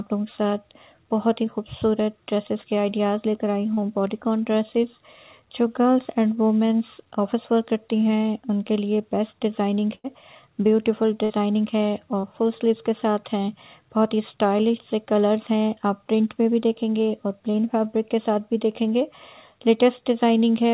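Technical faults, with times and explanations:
3.74–3.80 s, 12.20–12.26 s and 17.51–17.57 s, short concealed packet loss: About 30 ms of audio failed to reach the decoder in time at each point. The receiver bridged each hole with 25 to 35 ms of synthesised continuation, extending the last pitch or shaped noise before blending back. Each one is heard as a brief smear or wobble. On a spectrogram it appears as a short, overly smooth patch under the 4 kHz ceiling of the G.711-style call path.
9.95–10.07 s and 11.24–11.33 s, burst of packet loss: Runs of packets went missing, about 90 ms and then 60 ms. The receiver stretched the last sound across the 90 ms and 58 ms gaps while fading it, so the sound hangs as a buzz or hiss before jumping ahead. On a spectrogram the harmonics or noise band freeze flat and dim. The waveform shows a shrinking envelope followed by an abrupt restart.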